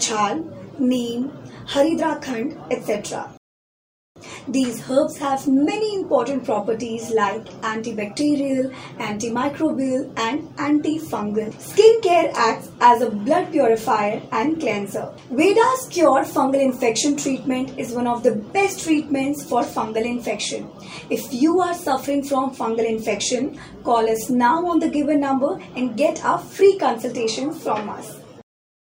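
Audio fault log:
3.37–4.16 s, rebuffering stall: the sound cuts to silence for about 0.79 s, then picks up exactly where it stopped, because playback ran out of downloaded audio and waited for more. Unlike a dropout, nothing is skipped; the gap only adds time.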